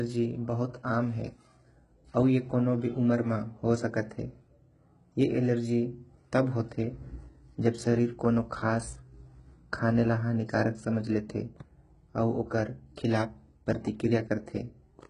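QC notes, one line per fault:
Throughout: HE-AAC compression. Nothing above about 11.1 kHz, and the sibilants come out gritty and metallic. That's likely a very low-bitrate HE-AAC encode, around 12 kbps, with the treble rebuilt from copied lower bands rather than coded, so it doesn't quite match.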